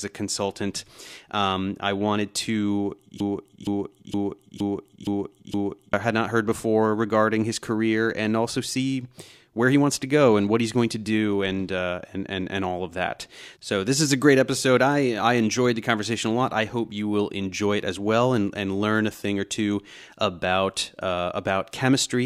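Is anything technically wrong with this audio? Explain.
Yes. From 3.20 s to 5.93 s the speech falls into a broken-record loop. A 0.47 s fragment plays six times back to back, each repeat identical. The cause is likely a stall in the player, encoder or stream that kept re-sending the last fragment it held instead of fresh audio. Whatever should have played during that stretch is lost, so the speech jumps ahead when the loop releases.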